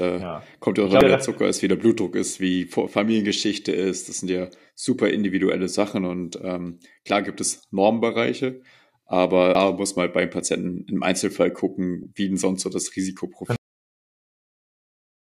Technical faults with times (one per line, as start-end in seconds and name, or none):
1.01 damaged data in a compressed stream
9.55 damaged data in a compressed stream
12.03-12.05 damaged data in a compressed stream
13.56-15.35 cut-off end